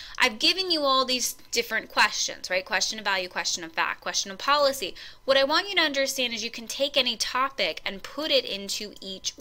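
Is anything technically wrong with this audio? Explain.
No, nothing here stands out as a technical problem; it all sounds just as it should.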